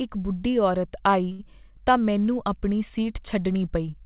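At 1.32 s the speech hangs for 69 ms, to 1.41 s: a short stall from a late packet. With the jitter buffer empty, the last sound is held; unlike a lost packet, nothing is skipped, and speech resumes from the same point, 69 ms later.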